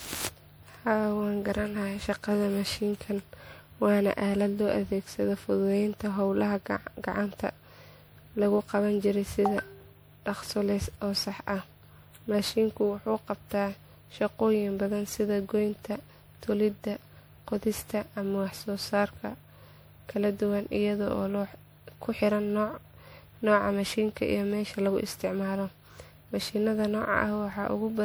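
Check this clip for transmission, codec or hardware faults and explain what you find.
One codec fault runs through the whole clip. Generation loss: the speech sounds swirly, hollow and smeared with softened attacks, likely from about ten rounds of re-encoding at what sounds like 96 kbit/s MP3, each adding fresh quantisation damage.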